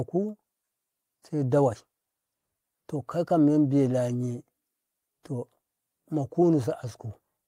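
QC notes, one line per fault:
No faults detected in this clip.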